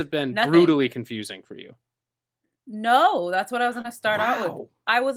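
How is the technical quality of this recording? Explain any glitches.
There's one glitch worth flagging, a short concealed packet loss at about 3.81 to 3.86 s, right after "that's what I was" and just before "to start". Around 20 ms of the call arrived too late for the decoder, so the receiver patched roughly 26 ms by stretching the last bit of sound forward and then blending back into real audio. You hear it as a quick smear or tiny wobble, and a short consonant there can get swallowed.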